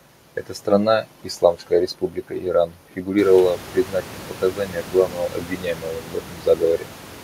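No technical faults are audible.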